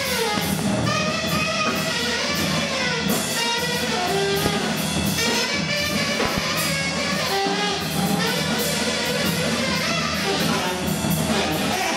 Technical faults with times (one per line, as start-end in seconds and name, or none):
0.38-0.61 loud pop
4.46-4.48 loud pop
6.25-6.40 loud pop